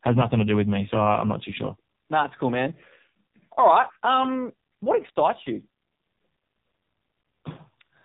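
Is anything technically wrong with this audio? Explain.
Yes. The whole clip carries AMR narrowband mobile codec damage. Nothing above about 3.8 kHz survives. The speech is rebuilt from a vocal-tract model and sparse pulses per 5 ms. The heavy buzzy, synthetic quality fits a low mode around 5.9 kbps.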